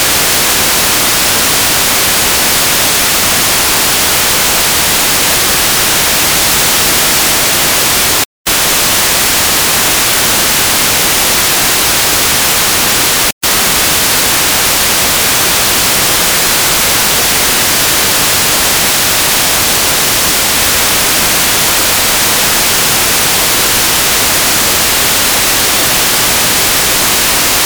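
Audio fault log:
8.24 s and 13.31 s, Bluetooth stall: the sound drops to complete silence for about 0.23 s at 8.24 s and about 0.13 s at 13.31 s, then resumes. These gaps are likely wireless dropouts. Radio interference delayed the audio packets long enough for the headphones' small playback buffer to empty, so output stopped dead until retransmitted data arrived. That is why each gap is a clean, short hole rather than a fade.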